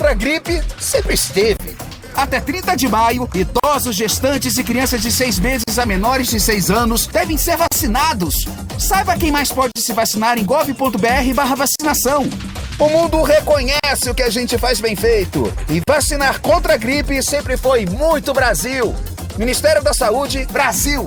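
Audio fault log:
1.57–15.88 s, gaps at a join of encoded pieces (1.57, 3.60, 5.64, 7.68, 9.72, 11.76, 13.80, 15.84 s): separately encoded pieces were joined untrimmed, so each encoder's start delay and final-frame padding remain. The sound drops out every 2.0 s, for 28 ms first and 40 ms thereafter, with smeared edges, then resumes where it stopped.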